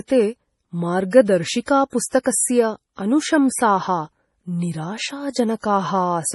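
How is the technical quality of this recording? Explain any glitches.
Pretty rough, honestly. The speech has heavy codec damage all the way through, plus a few smeared attacks.

Across the whole clip, nothing comes through above about 11.5 kHz, and the top end sounds watery and swirly. That's likely MP3 compression, at a bitrate that fits something as low as 32 kbps. The encoder chops off the treble and drops weak frequency lines that flicker between frames.

Then there's pre-echo at 1.65, 2.08, 2.23 and 5.61 s, lasting 34, 42, 23 and 27 ms. Each sharp onset gets a short hiss just ahead of it, because the codec spreads the noise it budgets for the loud attack across the whole block, including the quiet part before it.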